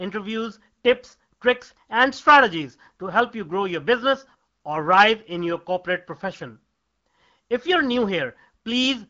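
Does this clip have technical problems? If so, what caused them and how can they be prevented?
No, no technical faults heard.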